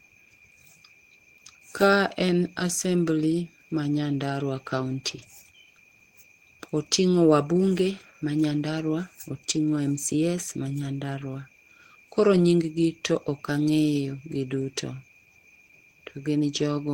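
No technical faults are audible anywhere in the speech recording.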